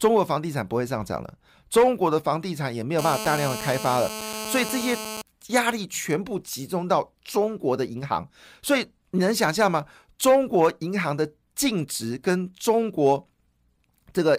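GSM phone buzz runs from 2.99 to 5.22 s. A 2G handset close to the recording chain was in a call, pulsing its transmitter about 217 times a second, and somewhere in the audio circuitry a junction rectified those radio bursts into an audible signal. The result is a harsh, rasping buzz at 217 Hz, rich in harmonics, nearly steady across its span and sitting about 9 dB below the speech, with no relation to what is being said.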